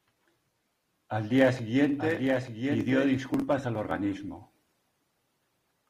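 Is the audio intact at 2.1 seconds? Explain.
No. At 2.1 seconds the speech carries a doubled audio track, running from 1.99 to 3.11 s. A second, full-band copy of the speech sits roughly a second behind the original and about 5 dB quieter, with no decay or room colouring, so it sounds like a dry, distinct repeat rather than an echo. It starts and stops abruptly at the span edges. The likely cause is the signal being captured a second time through a slower path.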